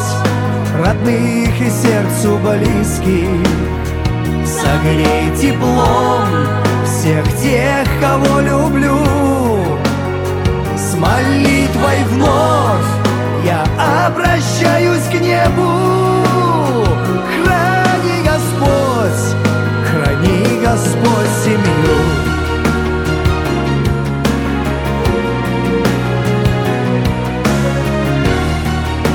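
No technical faults are audible.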